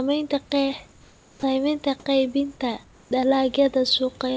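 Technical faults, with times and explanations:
0.92–1.43 s and 2.84–3.11 s, comfort noise in place of the background: in both pauses the room background, sitting about 31 dB below the loud parts, becomes a steady, featureless hiss about 2 to 3 dB quieter, likely from discontinuous transmission, where the receiver synthesises noise while the sender is silent.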